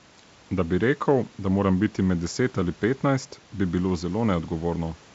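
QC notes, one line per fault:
No faults to note.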